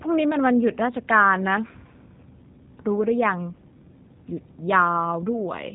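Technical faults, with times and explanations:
Throughout, G.729 codec: the speech was rebuilt from a vocal-tract filter, pitch predictor and a few pulses per 10 ms frame, which fits an 8 kbit/s G.729A link, so nothing above 4 kHz survives and the sound is plainly rough and synthetic.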